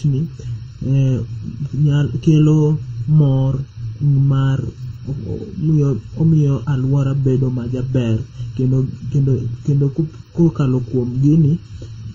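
Throughout the recording, one channel arrives a fraction of a millisecond behind the other, and the two are then folded into a single mono signal. This channel delay (comb filtering) makes the shared parts of the speech cancel at evenly spaced frequencies. The first deep notch falls somewhere around 700 Hz, and further notches follow regularly up the spectrum. The voice sounds hollow and phasey, with a fixed colouring that never moves.

Over the whole clip, the audio also appears to have passed through several low-bitrate encoders in a row, likely transcoding between lossy codecs. The sound points to an HE-AAC encode at around 32 kbit/s, then MP3 at a similar rate, then HE-AAC again. Each stage re-encodes the previous stage's artefacts and adds its own, so the different artefacts are heard together. Nothing remains above 15.8 kHz.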